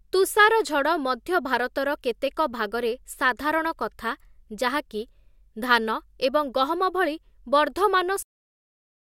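At 8.23 s the speech stops abruptly mid-sound and falls straight to digital silence with no decay: a cut-off end, where the final buffers were never written.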